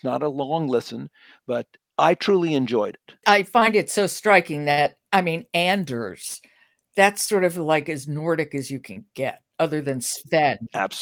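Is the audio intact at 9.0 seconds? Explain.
No, the audio just before 9.0 seconds is not intact. From 8.93 to 8.98 s there is a brief smear where the sound is stretched instead of heard cleanly. This is short concealed packet loss: about 20 ms never arrived, so the decoder extended the preceding sound for 29 ms and trimmed 9 ms while blending back.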